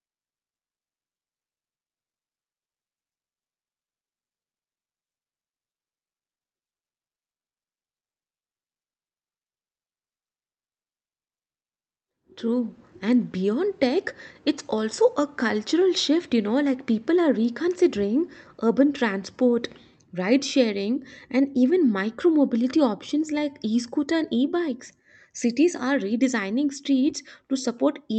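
No technical faults are audible.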